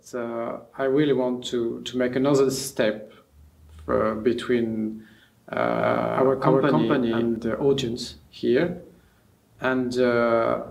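From 5.74 s to 7.36 s a doubled audio track appears: a second, full-band copy of the sound runs roughly a third of a second behind the first, at about the same level. The trailing copy has no decay or room colour, and it cuts in and out abruptly at both ends. The likely cause is a second, slower capture path mixed in alongside the direct one. On a spectrogram every onset repeats at a fixed offset, and the waveform shows stacked, time-shifted envelopes.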